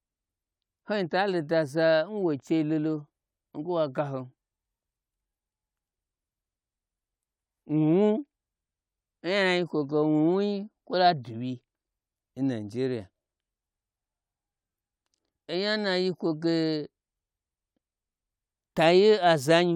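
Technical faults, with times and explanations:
No technical faults can be heard in this clip.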